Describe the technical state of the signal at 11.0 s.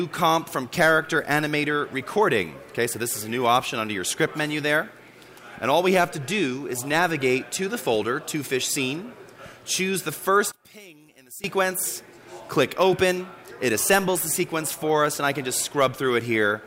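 At 11.0 s the sound is caught inside a sudden collapse running from 10.52 to 11.44 s, where the level falls by about 20 dB. The likely cause is one channel inverted: with one stereo side in reversed polarity, the content common to both cancels in the mono sum, leaving only their difference. Unlike a plain dropout or gain dip, the sound doesn't simply go silent or shrink evenly. A faint residue survives, stripped of its centre.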